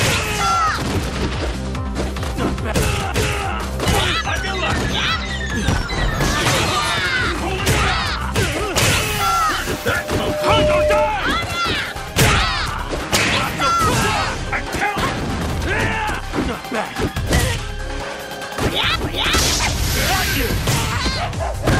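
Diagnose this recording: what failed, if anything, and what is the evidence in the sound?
A pure tone near 603 Hz swells from 9.62 s, grows over about a second to roughly 5 dB above the programme, and stops at 11.15 s. This is loudspeaker feedback squeal at the analogue and playback stage: the microphone re-captured its own loudspeaker, and loop gain above one at 603 Hz let that frequency grow on itself.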